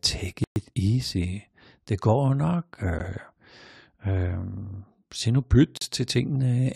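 Blocks of digital silence cut the speech abruptly at 0.44 s for 120 ms, at 2.99 s as a brief tick, and at 5.77 s for 40 ms. Each is a run of zeros output when the buffer went unfilled or a calculation produced invalid values.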